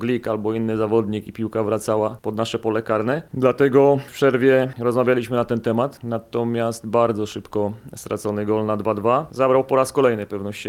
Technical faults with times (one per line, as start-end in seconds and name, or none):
7.32 repeated buffer